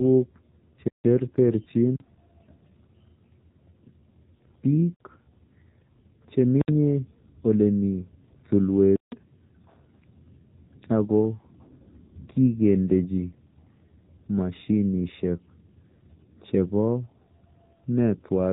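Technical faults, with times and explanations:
Throughout: AMR narrowband mobile codec. The speech has passed through AMR-NB at 7.4 kbps, and the damage is plainly audible. The codec works at 8 kHz sampling, so nothing above 4 kHz survives, leaving the voice dull and band-limited. At this fairly low bitrate, the vocal-tract model is driven by only a sparse set of pulses per 5 ms subframe, so the voice sounds buzzy and synthetic.
11.94 to 12.01 s: AMR bit errors. For roughly 66 ms, which fits about three 20 ms frames, the speech turns hoarse, scratchy and gargly while keeping roughly its pitch and loudness. Some of the less-protected bits in those frames arrived flipped, at an error rate of a few percent, while the checksum on the core bits still passed. The excitation pulses land in the wrong positions, and the finer gain, pitch and spectral values are corrupted.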